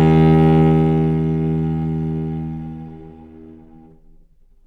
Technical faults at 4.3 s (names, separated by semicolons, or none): none